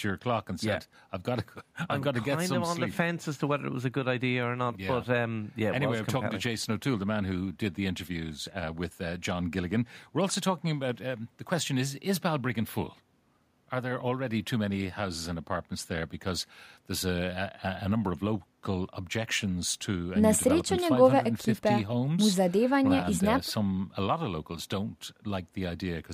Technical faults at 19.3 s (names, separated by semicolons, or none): none